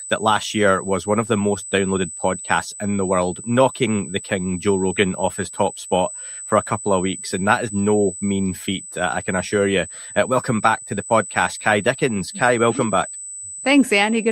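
USB whine runs from start to end: a fixed-pitch tone at 8 kHz, strongest at its 16 kHz harmonic, sitting roughly 10 dB below the sound. It comes from current drawn in 125-microsecond bus microframes leaking through power or ground into the audio path.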